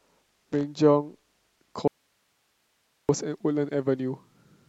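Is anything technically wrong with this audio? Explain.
Yes, there are two faults in this speech clip.

Loose connector crackle, 0.53 to 0.63 s: a worn or dirty contact is making and breaking as it shifts, chopping the signal for about a tenth of a second and producing a brief, irregular burst of scratchy crackle over the speech.

Audio dropout to a faint residue, 1.88 to 3.09 s: the wanted signal disappears abruptly for about 1.2 s, likely because the feed broke upstream while the path after it stayed live. The gap holds only hiss, roughly 50 dB below the speech, before the sound cuts back in.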